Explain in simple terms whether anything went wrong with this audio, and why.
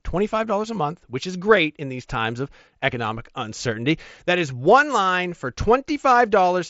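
Nothing went wrong with this audio; the speech simply passes through an ordinary Bluetooth mSBC headset codec, which carries sound only up to about 7.7 kHz.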